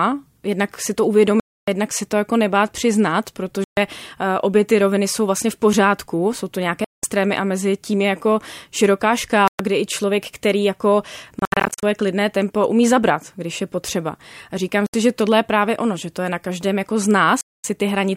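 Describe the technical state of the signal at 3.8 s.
Just before 3.8 s, a likely Bluetooth dropout ends: packets failed to reach the headphones in time and were discarded, so the speech cuts to silence from 3.64 to 3.77 s, a gap of about 130 ms with abrupt or briefly faded edges, then resumes as though it had kept playing.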